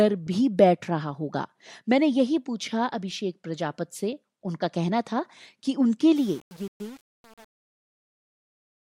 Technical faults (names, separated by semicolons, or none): truncation distortion on a fade